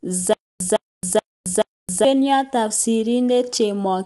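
From the first moment to the end, the speech carries low-delay AAC compression. The voice sounds rough and grainy, with noise filling the gaps between harmonics. Nothing is present above 11.6 kHz. The likely cause is AAC-ELD, the low-delay coder of video calls. Its short frames resolve pitch poorly and spend bits fast. The damage is plainly audible, which fits a low bitrate of around 32 kbps.

From 0.33 s to 2.05 s there is a stutter with silent gaps. A burst of 159 ms plays, then 269 ms of dead digital silence follows. The cycle repeats every 428 ms, four times in all. The likely cause is a stalled player or stream replaying its last fragment at each retry and then running empty. Whatever should have played there is gone.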